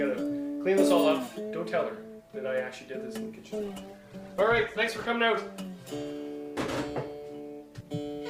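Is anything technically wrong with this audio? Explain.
Yes. From 3.46 to 5.16 s a call bitrate drop cuts the encoder from 64 to 14 kbps, so the sound turns coarse, watery and muffled. Unlike packet loss, there are no gaps.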